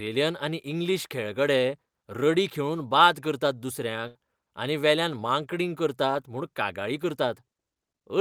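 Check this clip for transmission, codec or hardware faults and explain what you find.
One transmission fault is present: a burst of packet loss from 4.07 to 4.16 s. Consecutive packets failed to arrive in time, so the receiver concealed the gap by extending the preceding sound for about 75 ms while fading it down, heard as a brief held buzz or dying hiss. Speech then resumes with about 80 ms missing.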